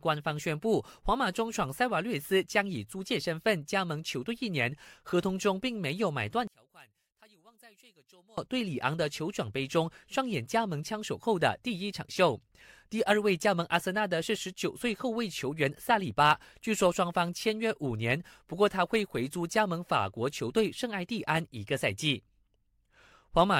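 A speech recording with one clear problem: from 6.47 to 8.38 s the voice suddenly sinks by about 30 dB, leaving only a faint remnant before it snaps back to full level. That pattern is what you'd get from one channel inverted, and that's the likely cause here. With one side's polarity flipped over that stretch, everything shared by left and right cancels once the two are summed to mono, so the centred voice almost disappears and only the small difference between channels survives.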